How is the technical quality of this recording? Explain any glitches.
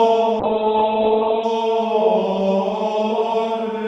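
A call bitrate drop runs from 0.4 s to 1.51 s. The call's bandwidth estimate fell, so the Opus encoder was forced to spend far fewer bits, a fall that sounds consistent with going from about 48 kbps to about 8 kbps. It coded the audio much more coarsely and pulled the top of the band down from 20 kHz to 4 kHz. For roughly a second at its lowest, the sound turns muffled and rough, with a watery texture, before the bitrate recovers.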